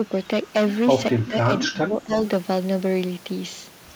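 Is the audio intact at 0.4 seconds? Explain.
No. At 0.4 s the speech has a harsh, crackling fuzz on its louder moments. This is hard clipping, present throughout the clip. The signal is driven about 12 dB past what the stage can pass, so around one sample in twenty has its peak sliced flat, adding bright upper harmonics.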